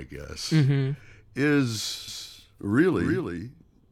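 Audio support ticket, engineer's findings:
Doubled audio track, 2.08 s to end: dry copy roughly 300 ms late, about 5 dB down, abrupt onset; likely second capture through slower path.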